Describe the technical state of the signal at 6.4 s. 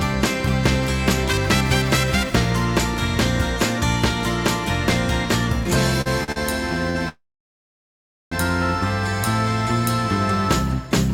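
Right at 6.4 s the audio comes out of a short stall from a late packet, spanning 6.32 to 6.38 s: the jitter buffer ran dry, so about 41 ms of the last sound was stretched until the packet arrived. Unlike a lost packet, nothing is skipped; playback resumes exactly where it stopped, now 41 ms later, leaving a held sound with a faint buzz or dip.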